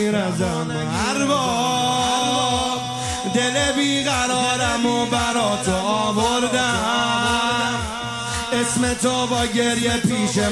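Resampler restarted on every block, throughout: converting 48 kHz to 24 kHz in isolated 20 ms blocks leaves errors at each edge, a 50 Hz buzz riding the sound.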